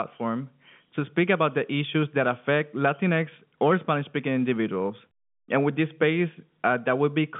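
No technical faults can be heard in this speech recording. It carries the narrow band of G.711 telephone coding, roughly 150 Hz to 3.5 kHz with nothing above about 3.7 kHz, and any coding noise riding under the signal is faint at most.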